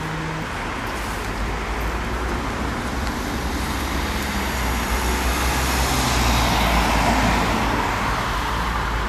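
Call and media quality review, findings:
No technical faults are audible; the signal path shows no dropouts, distortion, level problems or timing errors anywhere in the audio.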